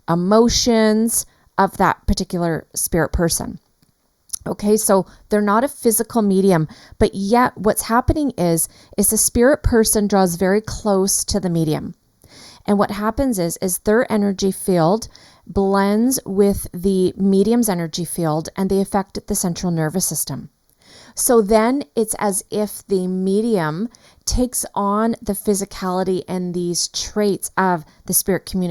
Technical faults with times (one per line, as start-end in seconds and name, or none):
0.00-28.71 channel delay (comb filtering)